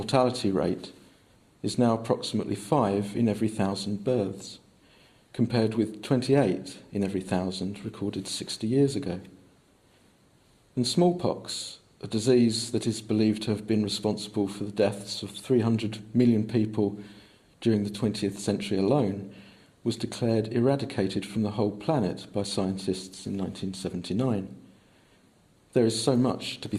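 Nothing technically wrong turns up anywhere in this one, so there's no fault to point to.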